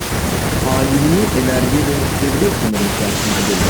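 Listening to this speech recording, nothing stood out as a technical problem at any point.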